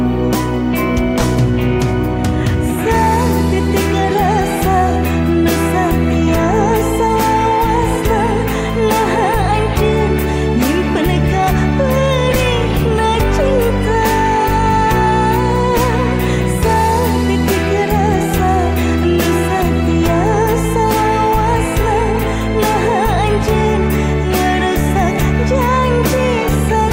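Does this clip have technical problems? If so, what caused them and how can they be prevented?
No, nothing audible points to a technical fault, so there is no cause to trace and nothing to prevent.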